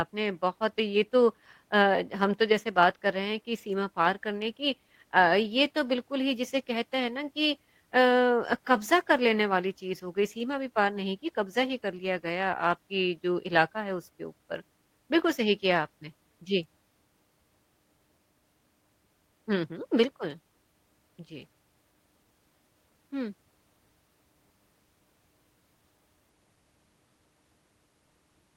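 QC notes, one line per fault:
Nothing stood out on listening to the recording.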